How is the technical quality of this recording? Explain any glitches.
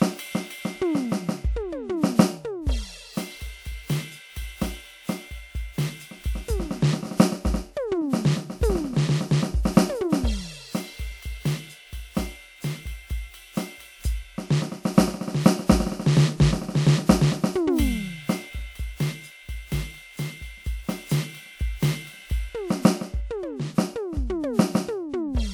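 The music carries a lossy-coding fault throughout. From start to finish it sounds swirly and hollow, with smeared transients and content extending only to about 20.1 kHz. The likely cause is generation loss: roughly three successive lossy encodes, consistent with WMA 1 near 96 kbit/s, each requantising on a shifted frame grid so that noise and spectral gaps accumulate.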